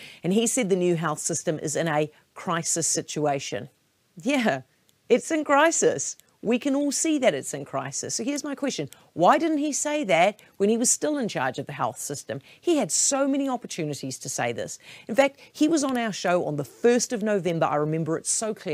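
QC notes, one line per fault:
Nothing to log here, since no faults turn up anywhere in the clip.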